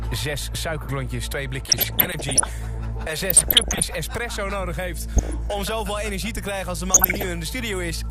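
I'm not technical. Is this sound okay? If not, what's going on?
No. The whole clip sounds dull and muffled, with a gurgly, grainy roughness, much like a low-quality digital radio station. That is likely MP2 compression, an older squeezing method that discards the upper treble and keeps the remaining sound only roughly.

There are also four short bursts of burbling, from 1.69 to 2.49 s, 3.30 to 3.82 s, 5.16 to 5.34 s and 6.92 to 7.28 s. This is DAB burbling: reception errors corrupt small parts of the signal, so individual slices of the sound get short blips of noise.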